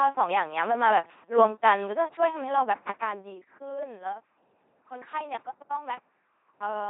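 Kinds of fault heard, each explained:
LPC-10 vocoder: The speech has been resynthesised by a very low-rate linear-prediction coder, which fits 2.4 kbit/s LPC-10. A short all-pole filter models the vocal tract and is excited by either a pulse train or noise, each frame being wholly voiced or wholly unvoiced. The damage is heavy, giving a buzzy, mechanical robot quality with no content above 3.8 kHz, and it persists through the deliberate fader-style level changes.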